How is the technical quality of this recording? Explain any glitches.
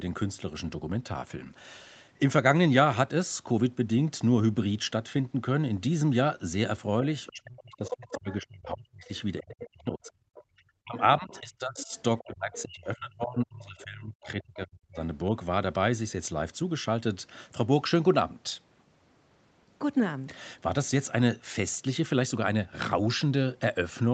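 The recording has two connected problems in the middle of the clip, both typical of a hands-free call. The audio also has nothing above 8 kHz, which fits an Opus call path at a modest bitrate of around 24 kbps.

Other side's voice leaking through: a second voice is audible from 7.26 to 8.35 s at about 10 dB below the main talker, then more faintly, about 20 dB down, from 9.05 to 10.42 s and from 10.97 to 12.61 s. The likely cause is the far end's audio playing from the device loudspeaker, reaching the microphone and not being fully removed by the echo canceller, so residual echo rides underneath the near-end speech.

Speech suppressed in double talk: from 7.3 to 15.34 s, the main talker's level repeatedly drops, for around five seconds in total, at times by roughly 30 dB, so the speech comes and goes in pieces. This overlaps the leaked far-end voice. The likely mechanism is the echo canceller seeing both sides active at once, failing to tell the local talker from the loudspeaker echo, and attenuating everything.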